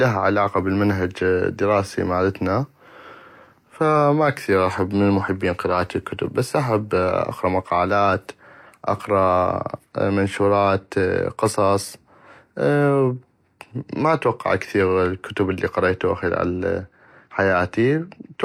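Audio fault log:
No fault can be heard anywhere in the speech; the signal stays continuous for its whole duration.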